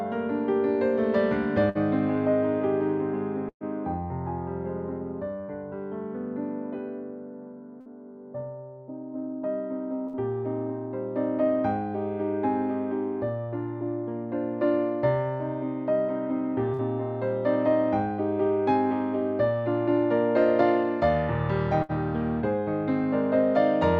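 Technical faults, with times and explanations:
1.69–1.78 s, 3.49–3.64 s, 7.81–7.89 s, 10.08–10.16 s, 16.73–16.82 s, 21.83–21.92 s: burst of packet loss. The sound briefly smears into a held, fading tone, then jumps ahead. About 60 ms goes missing each time, and about 120 ms at 3.49 s, which ends in roughly 70 ms of silence. The receiver stretched the last good audio over each gap and faded it down.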